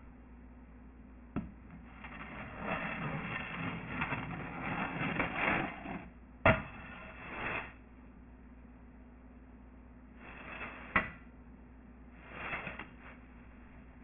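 Aliasing runs throughout. The audio was downsampled without an anti-alias filter, so content above the 3 kHz fold point mirrors back down as false, unrelated tones. That points to a 6 kHz rate. The folded energy is roughly as loud as the genuine sound, leaving it gritty and metallic.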